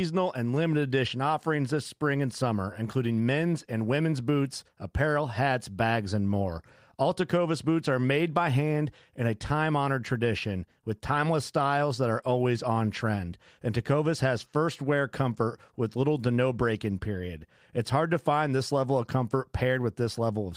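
Listening through this speech recording, nothing stood out as a technical problem at any point.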